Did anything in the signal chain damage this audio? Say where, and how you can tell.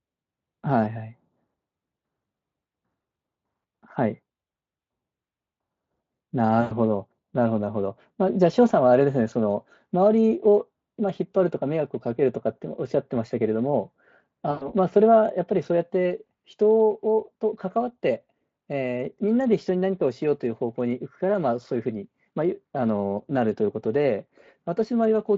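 Yes. At the network stage, packets went missing twice, and the speech decoder covered the gaps with packet loss concealment. Around 6.61 to 6.73 s and again around 14.51 to 14.71 s, the speech is stretched into a buzzy tone or a coloured noise that fades out rather than cutting cleanly. That fits roughly 100 ms of lost audio each time, likely about five 20 ms Speex frames. The decoder extrapolates from its last pitch and filter while lowering the gain, and the voice stays thin for a short moment after packets resume.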